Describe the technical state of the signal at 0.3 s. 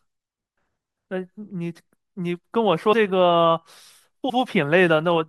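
At 0.3 s the speech signal is intact, with no audible fault at that moment.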